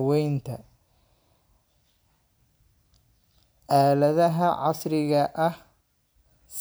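Nothing in this speech recording stands out as a technical fault at any point along the way.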